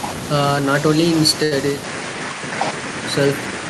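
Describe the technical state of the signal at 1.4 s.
A short stall from a late packet runs from 1.43 to 1.53 s. The jitter buffer emptied, so the receiver stretched the last sound for about 78 ms, losing nothing but running later. On a spectrogram the harmonics freeze flat; the waveform repeats near-identical cycles.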